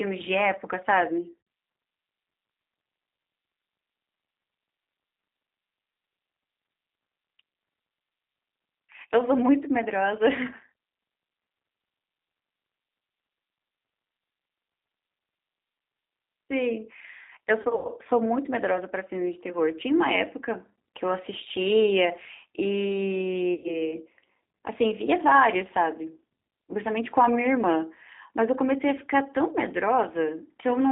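Speech coded throughout with the G.729 codec at 8 kbit/s, confined to roughly 250 Hz to 3.7 kHz, with a plainly rough, synthetic quality rather than simple telephone band-limiting. VoIP packet loss concealed by the speech codec occurs at 1.41 to 1.47 s (60 ms), 17.61 to 17.89 s (160 ms lost in patches across 240 ms, longest gap 100 ms) and 23.54 to 23.91 s (100 ms). Each gap is stretched into a fading buzzy tone or coloured noise rather than silence or a click, and recovery is sluggish.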